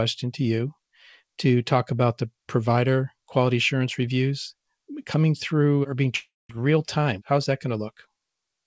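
At 6.16 s, right after "coming through or being", the speech stops and the last sound carries on as a buzzy tail that fades out, leaving roughly 0.19 s of silence before "real time" arrives at 6.51 s with about 0.34 s of speech gone. That is a long network dropout, likely packets lost in transit. A brief packet loss would be papered over almost seamlessly; here the concealment runs out and content is skipped. The band-limited sound, with nothing above 8 kHz, fits a G.722 call path.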